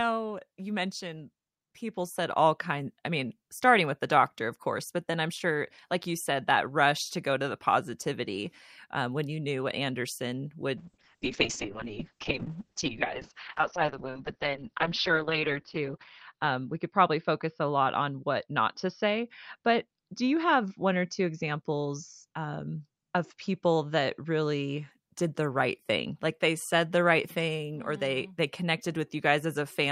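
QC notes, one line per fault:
10.79–24.97 s, call bitrate drop: the encoder rate falls from 48 to 6 kbps, bottoming out for about 4.5 s. Coarser coding makes the speech rough and watery, and bandwidth narrows from 20 kHz to 6 kHz, muffling it until recovery before "did the right thing".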